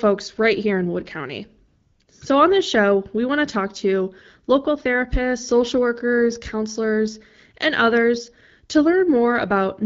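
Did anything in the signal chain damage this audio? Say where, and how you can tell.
Yes. AMR comfort noise, produced by the codec's discontinuous transmission, replaces the real background from 1.67 to 1.99 s and again from 2.03 to 2.07 s. The sender stopped sending speech frames, so the receiver filled those gaps with smooth synthetic noise that audibly switches in and out.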